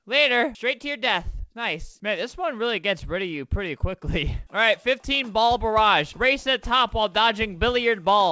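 No technical faults can be heard anywhere here.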